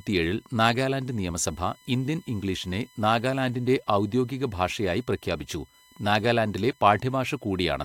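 From start to end, a USB whine sits faintly under the speech: a fixed tone at 1 kHz, loudest at its 2 kHz harmonic, from bus current leaking in through power or ground. On a spectrogram it forms steady horizontal lines across the whole clip.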